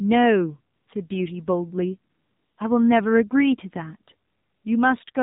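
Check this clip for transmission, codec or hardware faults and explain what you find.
Two things are going on: the whole speech clip has been through a mobile codec, and three pauses have been filled in synthetically.

The AMR narrowband mobile codec is there from start to finish. Everything above 4 kHz is gone, so the voice sounds boxed-in and phone-like. On top of that there's a clearly buzzy, synthetic edge, because the codec rebuilds the voice from a vocal-tract model plus a handful of pulses per subframe. That damage level fits one of the lower AMR-NB modes, around 7.4 kbps.

AMR comfort noise shows up three times: 0.76 to 0.88 s (about 120 ms), 2.12 to 2.58 s (460 ms) and 4.28 to 4.64 s (360 ms). In each gap the phone decided nobody was talking and stopped sending speech frames. The receiver then filled the hole with generated noise built from a rough level and spectrum estimate. 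You hear the real background swap for a smooth, even hiss that switches in and out at those edges.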